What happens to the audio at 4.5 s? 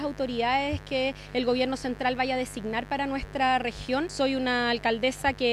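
At 4.5 s a mains buzz sits under the sound, as it does from start to end. Switching spikes at twice the 50 Hz mains rate add harmonics reaching into the kilohertz range. The result is a steady, raspy buzz, roughly 20 dB below the signal.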